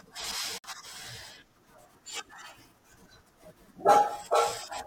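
A gap at a join of encoded pieces opens at 0.58 s and lasts until 0.64 s, a silence of about 56 ms cutting into otherwise continuous speech. The audio was encoded as separate pieces and spliced without trimming, so the encoder's start-up delay and the padded final frame both survive as dead air at the seam. The codec smears the edges of the dropout, so the silent part is shorter, and the speech resumes exactly where it broke off.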